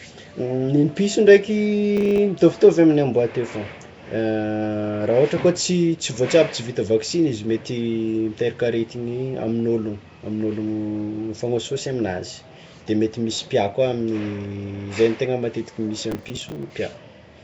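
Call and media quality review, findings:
Whole clip: likely Nellymoser compression in the encode path. Coarse fixed-rate block coding starves weak bands and fills them with noise. Speech carries a rough, hissy halo and underwater smear, with nothing above 7.7 kHz, consistent with a rate near 32 kbps.

1.97–2.18 s and 16.1–16.7 s: processor overload crackle. CPU missing consecutive audio buffer deadlines, each buffer roughly 10 ms, about ten misses then about fifteen. Stale audio is replayed with hard edges, heard as gritty tearing that stops once the load clears.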